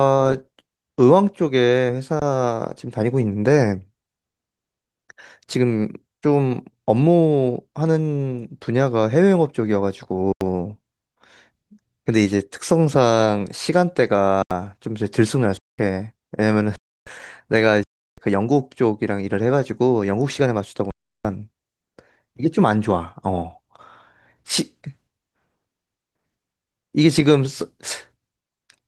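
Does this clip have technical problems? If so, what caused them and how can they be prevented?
Yes. The speech cuts out seven times, at 2.20 s, 10.33 s, 14.42 s, 15.57 s, 16.76 s, 17.84 s and 20.91 s. Each time the sound goes flat and silent, for between 23 ms and 341 ms, then resumes after a stretch of live audio, from about 20 ms to about 300 ms, was lost in the meantime. This is an underrun with held sample: the output buffer ran dry and the converter froze on its last value until data returned. The 85 ms and 341 ms gaps fit whole blocks of 4096 and 16384 samples. Underneath, the light Opus voice compression can be heard as ordinary coding. To prevent the dropouts, give the playback path a larger buffer and higher thread priority so that it is refilled before it empties.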